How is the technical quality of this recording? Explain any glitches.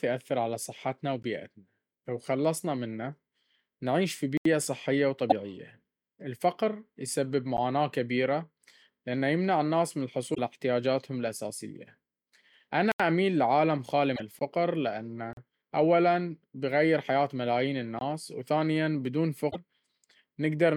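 The recording has two recurring problems: dropouts to digital silence and glitches from damaged compressed data. Both are scattered through the speech from start to finish.

The blocks of digital silence come at 1.23 s, 4.37–4.45 s, 7.57 s, 12.92–13.00 s, 14.39–14.41 s, 15.33–15.37 s and 17.99–18.01 s. Here the audio is swapped for silence with no fade in or out. The short ones, around 11 to 20 ms, come across as ticks or pops. The 40 ms gap and the two 80 ms gaps are little holes in the speech.

The damaged data in the compressed stream shows up at 5.27–5.32 s, 10.31–10.39 s, 14.12–14.20 s and 19.48–19.56 s, each lasting roughly 60 to 85 ms. In those spots, bad bytes in the stream throw the decoder off. It either misreads the frames or discards them, then has to hunt for the next valid frame header to resync. You hear a short chirp, squawk, click or hole instead of clean speech.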